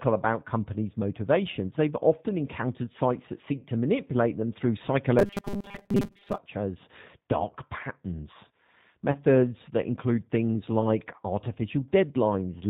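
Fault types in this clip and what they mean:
channel delay (comb filtering): one channel lags the other by roughly a tenth of a millisecond before mono summing, cutting evenly spaced notches from around 5 kHz and leaving a thin, hollow tone.
G.729 codec: speech is rebuilt from a filter and sparse pulses at a low bitrate, so nothing above 4 kHz survives and the voice sounds rough and synthetic throughout.
VoIP packet loss concealed by the speech codec: the decoder extrapolated over about 40 ms of lost audio after "often encountered sites that", and about 20 ms before "that include things like", producing brief fading smears.
robotic sound from repeated short buffers: from 5.19 to 6.38 s, likely a 5 ms buffer replayed while most of the real audio was skipped, turning the sound into a rigid 200 Hz metallic buzz.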